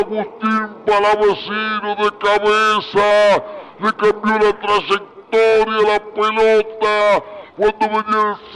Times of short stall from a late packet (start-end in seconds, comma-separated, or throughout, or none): none